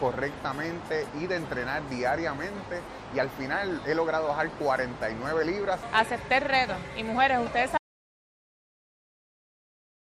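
An audio dropout to silence begins at 7.78 s and runs to the end of the clip, about 2.4 seconds. The sound stops abruptly in mid-flow and is replaced by digital silence, with no room tone or background noise underneath. The likely cause is a lost input, such as a disconnected device, a failed link or an accidental mute, while recording continued and filled the remaining time with silence. Whatever followed that moment is missing.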